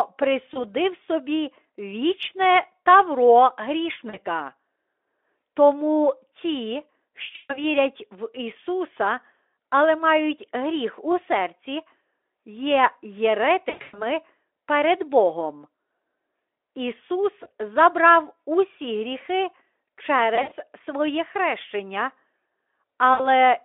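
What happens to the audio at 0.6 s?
Between 0.53 and 0.64 s there is VoIP packet loss concealed by the speech codec, consistent with a single lost 20 ms frame. Instead of a silent gap, the decoder extends its last pitch and filter into a brief buzzy tone or coloured noise that fades, then the speech stays weak until about 0.64 s.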